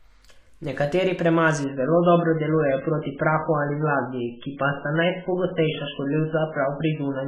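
From 1.64 s to the end, the adaptive stream drops to a lower bitrate, which fits a switch from about 128 kbit/s to 8 kbit/s MP3. The speech turns abruptly dull and smeared, with nothing above 3.5 kHz, yet without any gap.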